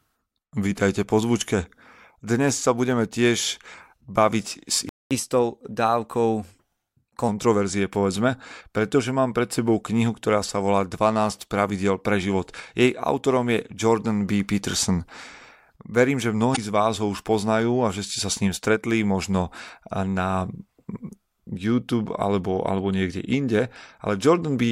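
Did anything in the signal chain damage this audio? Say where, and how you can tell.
Yes. At the playback stage, the speech drops to silence from 4.89 to 5.11 s, a gap of about 0.22 s, and then resumes. This is a playback stall, likely from the player running out of buffered data or having its thread blocked.

The player then does a catch-up at higher speed. From 5.11 to 7.29 s the speech runs 1.1 times faster and sits roughly one and a half semitones higher. Resampling the backlog wins back the lost time. Speed and pitch then settle back to normal.

At the codec stage there is damaged data in the compressed stream. From 16.52 to 16.58 s a short glitch interrupts the speech. Bad bytes corrupted the frames there. The decoder misread them, lost sync, and searched for the next valid frame header.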